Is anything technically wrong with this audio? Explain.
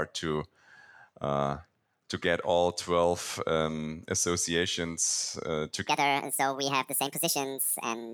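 Yes. From 5.89 s to the end, just after "um associations uh", a section plays at the wrong speed. It runs 1.67 times too fast, likely from being fitted to the wrong clock. Pitch rises with speed. The speech jumps roughly ten semitones higher and sounds hurried.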